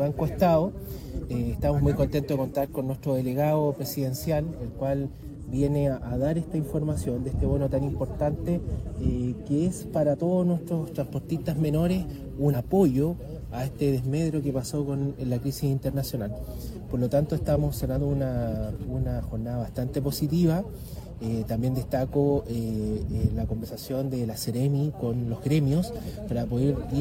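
At 12.50 s the sound breaks into a short blip lasting about 60 ms, ending at 12.56 s. This is damaged data in a compressed stream. Corrupted bytes make the decoder misread the frames there and lose sync until it finds a valid frame header. The same glitch returns from 17.93 to 17.98 s and from 23.60 to 23.65 s. Each is a brief glitch cutting across the audio.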